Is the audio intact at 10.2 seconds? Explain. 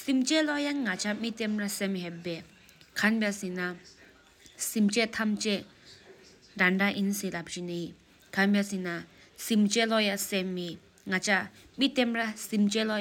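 Yes, the speech at 10.2 seconds plays through intact, with no dropout, click, distortion or other fault at that point.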